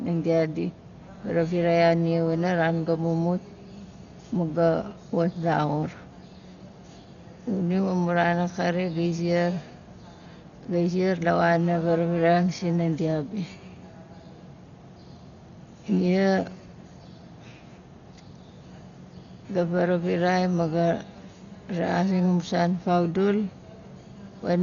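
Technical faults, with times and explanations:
Throughout, likely Dolby Digital compression: dull speech with rough, fluttering noise. The spectrogram shows a hard ceiling at 6.9 kHz with speckled holes below it, which fits a bitrate near 40 kbps.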